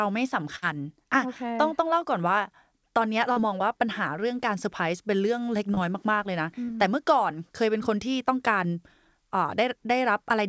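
Burst of packet loss, 0.56 to 0.64 s: about 60 ms of audio went missing, and the receiver stretched the last sound over the gap, fading it to a held buzz or hiss before the speech resumes further on. Short concealed packet loss at 3.32 to 3.38 s, 5.74 to 5.79 s and 6.65 to 6.70 s: each time 20 to 40 ms failed to arrive, so the receiver extrapolated and blended back, leaving brief smears or wobbles. The whole clip, carried over a call path, has nothing above 8 kHz, which fits a wideband codec such as G.722 at 64 kbps.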